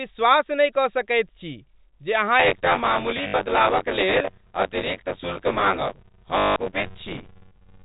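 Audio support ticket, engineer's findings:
Buffer tearing, 2.39 s to end, starting after "छी जे अहाँ". Continuous robotic rattle at 93.8 Hz, which fits a 512-sample ring buffer. Likely component: playback buffer, writer and reader slipped. About a third of each period replays audio roughly 20 ms old. Unlike dropouts, it is steady and present only with signal.

Packet loss with last packet repeated, 3.28–3.34 s (60 ms) and 6.38–6.56 s (180 ms). Short robotic stutters. Likely component: jitter buffer or packet-loss concealment on the receive side, looping the last good packet. The stutter rate points to 20 ms packets, giving a 50 Hz buzz, distinct from the steadier 93.8 Hz tearing rattle. Bursts are confined to the gaps, not continuous.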